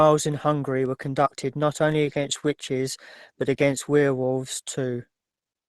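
Lost packet rebuilt from error correction at 2.05 to 2.23 s and again at 4.23 s: each missing stretch was replaced by the low-bitrate copy carried in the next packet. The first, 100 ms long, fits five lost 20 ms packets; the second fits one. There is no gap, but both patches sound rougher and noisier than the surrounding audio of the Opus call.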